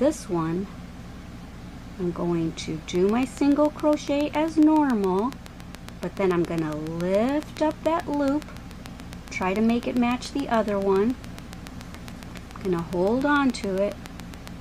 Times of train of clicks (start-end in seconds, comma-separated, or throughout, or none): 2.95-14.48